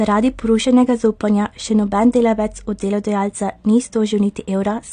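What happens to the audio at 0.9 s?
At 0.9 s the speech sounds dull and smeared with a warbly, fizzy edge, which is likely AAC compression running through the whole clip at a low bitrate, around 32 kbps. A spectrogram shows nothing above 9.7 kHz.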